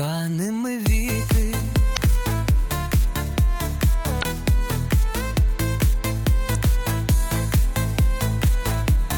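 Damaged data in a compressed stream causes three brief glitches at 1.93–1.98, 4.19–4.24 and 6.52–6.56 s. Each time, corrupted frames make the decoder lose sync briefly.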